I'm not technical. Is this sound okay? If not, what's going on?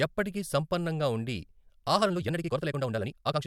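No. From 1.93 s, right after "ఎప్పటికీ సంపన్నంగా ఉండి", the rest of the speech was likely squeezed by software to fit a shorter slot, a time-stretched section running about 1.9 times normal speed. The pitch stays the same, but the pace suddenly becomes rushed.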